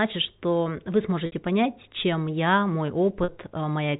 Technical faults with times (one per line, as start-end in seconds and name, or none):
1.26-1.32 packet loss with pitch repetition
3.24-3.28 packet loss with pitch repetition